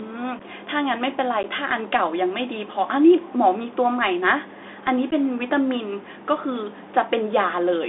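Throughout, you're hearing the Bluetooth CVSD headset codec: speech squeezed into roughly 250 Hz to 3.6 kHz, with scratchy s sounds and grainy hiss typical of a 64 kbps link. Then there's unconcealed Bluetooth headset packet loss at 0.39–0.41 s, 1.43–1.45 s and 5.11–5.13 s, where a few lost packets leave abrupt 7.5 to 11 ms holes.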